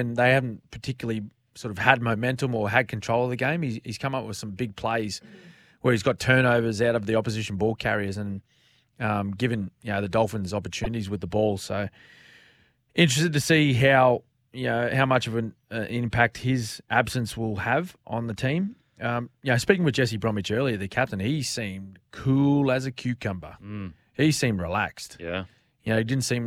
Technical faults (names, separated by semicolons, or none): corrupt frame decoded